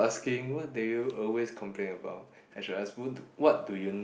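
From 0.05 to 0.82 s, automatic gain falling: the gain control judged the input too loud or its background noise too strong and eased its gain down by about 4 dB, so voice and background sink together, a tapering waveform envelope. From 2.55 s to the end, automatic gain rising: the control judged the input too quiet and lifted its gain, making voice and noise floor swell, visible as a steadily widening waveform and brightening spectrogram.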